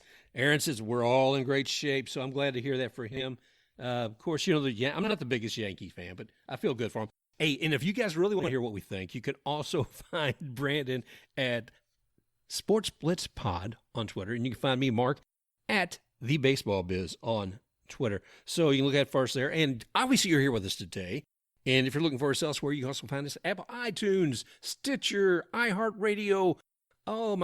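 Frames out of order at 3.12–3.23 s (after "to hear that for"), 5.03–5.13 s (after "you know the I'm", before "the biggest") and 8.39–8.49 s (after "if you guys really", before "hear what we think"): two adjacent runs of about 40 ms each swap places, so each brief stretch of speech plays with its halves reversed. This produces a garbled flutter, and no time is lost.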